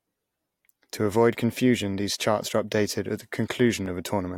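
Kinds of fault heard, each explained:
Dropped samples: two sharp clicks in the speech, at 1.33 s and 3.86 s, each likely from a tiny run of samples, well under a millisecond, going missing so the waveform jumps abruptly between values. A spectrogram shows each as a thin vertical line.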